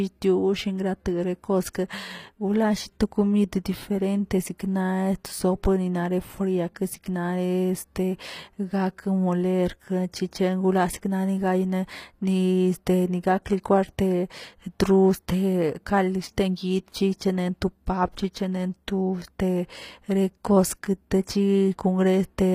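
Speech, with HE-AAC compression damage throughout. Sibilants sound gritty and metallic, with nothing above 15.5 kHz. The synthetic treble likely comes from spectral band replication at about 24 kbps.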